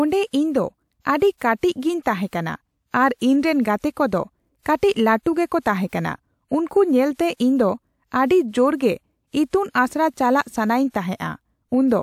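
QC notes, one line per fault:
2.27–2.33 s and 5.88–5.93 s, pre-echo: a short hiss runs ahead of a sharp speech onset, about 54 ms and 49 ms long. The transform codec spread quantisation noise sized for the loud attack across its whole block, so it fills the quiet just before the onset and the attack itself sounds softened. On a spectrogram, a broadband haze smears leftward from the onset edge. On the waveform, low-level fuzz precedes the transient.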